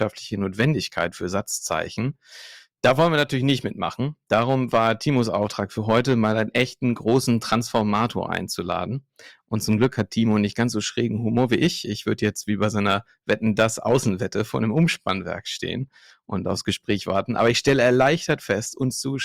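Hard clipping runs through this speech clip from start to finish. The signal is pushed about 3 dB past what the converter or number format can hold, so the tallest peaks are sliced flat. Less than one percent of samples are affected, so the result is brief crackle and grit on the loudest syllables rather than constant fuzz. Each flattened top adds high harmonics that the recording never contained.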